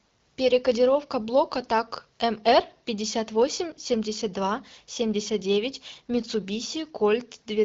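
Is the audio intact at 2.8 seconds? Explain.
Yes, the speech at 2.8 seconds is intact, carried through an AMR wideband (HD Voice) path at 12.65 kbit/s with nothing going wrong at that moment.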